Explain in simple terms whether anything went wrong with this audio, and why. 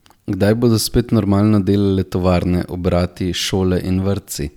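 Nothing went wrong here: the speech comes across steady and intact, with no glitches, dropouts or odd noises anywhere in the recording.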